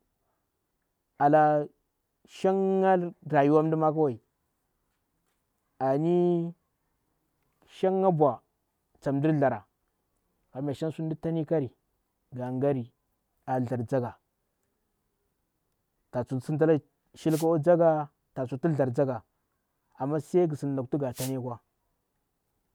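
A short swish of static cuts across the speech from 17.28 to 17.46 s, and a second burst follows from 21.12 to 21.33 s, just after "mngu sin lukti nga". Both are wireless microphone noise hits. The analogue FM radio signal faded as reflected paths cancelled at the receiver. With the carrier weakened, receiver noise rose for roughly a fifth of a second each time.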